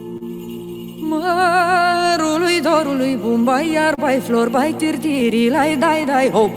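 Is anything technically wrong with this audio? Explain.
Yes, there are three kinds of fault.

Clock drift between sender and receiver runs through the whole clip. The sender's clock appears roughly 2 percent slow, so the jitter buffer keeps draining. The receiver repeats short pieces to keep up, producing small, irregularly spaced timing hiccups throughout.

A short stall from a late packet occurs at 0.17 to 0.23 s. The packet arrived late, the buffer ran dry, and the receiver held the last sound for 35 ms before resuming where it left off. Nothing is lost, but that moment lingers with a slight buzz or dip.

Scattered short gaps appear twice. From 2.27 to 3.99 s, about five late or lost packets were patched by extending the preceding audio, totalling around 50 ms, the longest near 30 ms. From 5.20 to 6.48 s, about four smaller patches total around 30 ms, none longer than roughly 10 ms. 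Each leaves a brief tick or smear.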